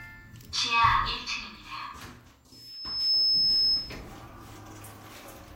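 At 2.52 s a loudspeaker feedback squeal kicks in. The mic is hearing its own speaker, and at around 5.2 kHz the loop gain tips past one, so that frequency feeds itself and swells over roughly half a second into a piercing, steady whistle that ends up sitting about 10 dB above the sound underneath it. It holds there until 4.03 s, when it ends.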